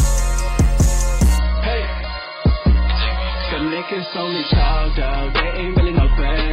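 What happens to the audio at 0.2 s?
Nothing goes wrong at 0.2 s; the audio plays through that moment intact, with no dropout, click or other fault.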